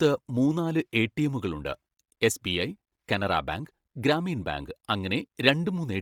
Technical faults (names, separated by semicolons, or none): Bluetooth LC3 compression